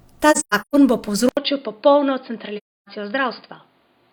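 From 0.31 to 0.76 s, AAC frame loss with muting leaves soft-edged holes, about 0.30 s in all, with runs up to roughly 150 ms. They fade out and in, unlike hard-cut dropouts. At 1.29 s an 80 ms silence precedes a duller, slightly quieter sound with nothing above 4.9 kHz and a faint new background noise, likely the input switched to a poorer device. Tone, level and noise all change together, which simple filtering would not do. From 2.57 to 2.88 s the muted frame loss returns, again about 0.30 s of gently faded gaps.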